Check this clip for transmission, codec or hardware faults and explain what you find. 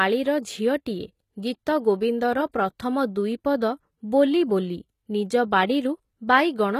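One codec fault is present, running through the whole clip. The speech carries plainly audible HE-AAC compression damage, with nothing above 14.9 kHz. The likely cause is HE-AAC coding at a low bitrate, around 20 kbps. Only the lower spectrum is coded directly, and the treble is rebuilt by copying lower bands upward under a coarse envelope. Those rebuilt harmonics don't align with the real ones, so sibilants sound gritty and lispy, with a metallic top end.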